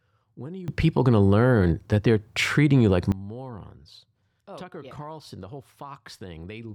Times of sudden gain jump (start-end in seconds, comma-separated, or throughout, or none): 0.68-3.12